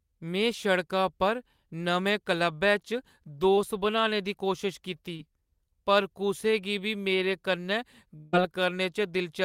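A speech recording in which packets failed to reach the decoder in time on three occasions. Twice this is short concealed packet loss: about 20 ms of audio went missing at 3.55–3.59 s, just before "बनाने दी कोशश कीती", and again at 5.17–5.21 s, right after that same phrase. Each time the receiver bridged the hole by extending the preceding sound, with roughly 15 ms and 19 ms of synthesized fill, then crossfaded back into real audio. The result is a brief smear or wobble lasting a few hundredths of a second. Later, from 8.17 to 8.35 s, right after "गी बी मेरे कन्नै", the gap is about 160 ms, most likely a long network dropout. Concealment covers almost all of it with roughly 159 ms of continued sound, so instead of silence there is a stretched buzz or hiss that decays before the speech resumes further on, with the lost stretch simply absent.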